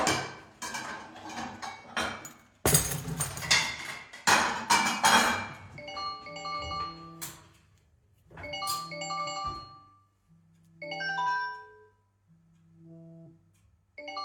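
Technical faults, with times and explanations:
No technical faults can be heard in this clip.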